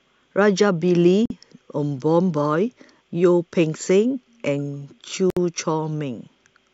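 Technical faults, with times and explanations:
1.26–1.30 s and 5.30–5.37 s, gap at a join of encoded pieces: silences of 47 ms and 64 ms, four seconds apart, where separately encoded pieces were joined with the encoder's start delay and last-frame padding left in. The speech stops abruptly and resumes where it left off.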